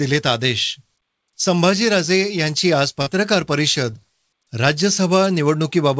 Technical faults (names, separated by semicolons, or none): short concealed packet loss